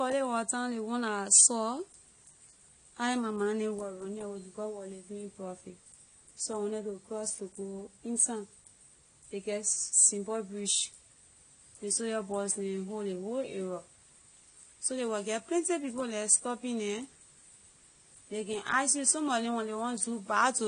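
From start to finish the speech carries plainly audible AAC compression damage, likely from AAC-LC at a low bitrate around 32 kbps. Nothing gets through above about 9.6 kHz, so it sounds dull and smeared, with a warbly, fizzy edge on sibilants where sparse high bands get patched over.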